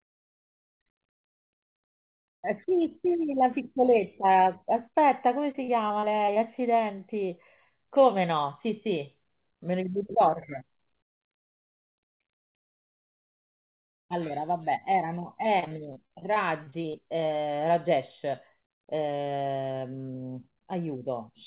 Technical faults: repeated packet loss (robotic sound)

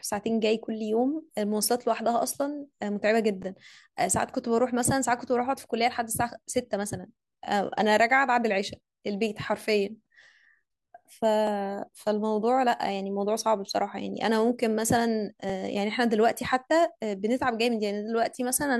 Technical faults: overlapping chunks

